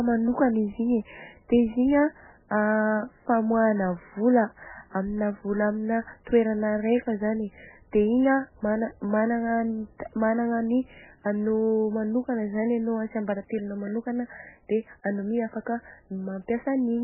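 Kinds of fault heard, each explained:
MP3 compression: Throughout the speech, nothing is heard above 3 kHz, and the sound is heavily degraded and watery. This is likely a very low-bitrate MP3, around 8 kbps, where the encoder cuts the treble and drops weak frequency lines that flicker between frames.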